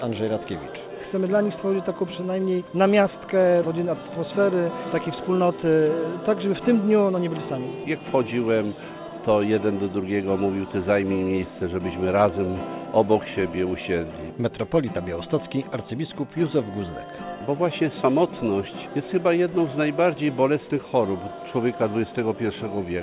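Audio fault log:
No faults are present: the sound carries the narrow band of a working call path, with nothing above 4 kHz and a coding grain consistent with G.711 mu-law at 64 kbps.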